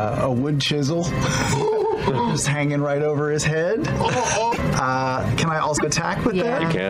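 At 4.51 to 4.59 s and again at 5.76 to 5.85 s, the audio skips ahead. About 80 ms of damaged audio follows each jump, roughly three 26 ms frames. A broken MP3 bit reservoir is the likely cause. Those frames decode from wrong bytes.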